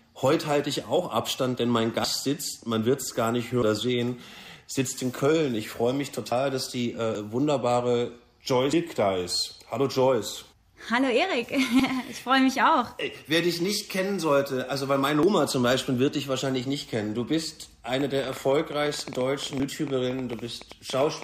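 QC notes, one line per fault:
7.15, 15.23 and 19.60 s, dropped buffer (overrun): at each of these the sound jumps forward, with no gap, as if about a tenth of a second went missing. The likely cause is the capture side not reading its buffer before the hardware overwrote it.
18.01 to 21.23 s, train of clicks: about forty similar ticks, roughly 11 a second on an uneven pace, peaking a few dB above the sound, running right to the end and overlapping the 19.60 s skip. This is likely interference or a struggling interface injecting pulses.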